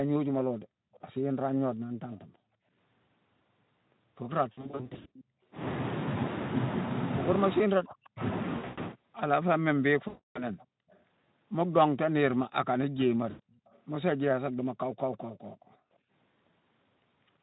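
From 0.65 to 5.42 s, and again from 10.66 to 16.1 s, the background is gated by the echo canceller. The room sound drops by up to about 38 dB in brief dips, totalling roughly a second in the later stretch, while the far end plays.

From 0.93 to 5.24 s and 10.58 to 15.76 s, a faint copy of the speech returns 339 ms late at about 25 dB below, likely an echo leak from a loudspeaker the canceller did not fully cancel.

VoIP packet loss concealed by the speech codec appears at 4.51 to 5.07 s, 8.57 to 8.80 s, 10.07 to 10.46 s and 13.29 to 13.40 s. The gaps are filled with a fading extrapolation of the last sound, buzzy or noisy, and speech stays weak briefly afterward.

From 7.55 to 8.22 s, speech is turned down, falling by roughly 40 dB during overlapping talk, with speech suppressed in double talk as the likely cause.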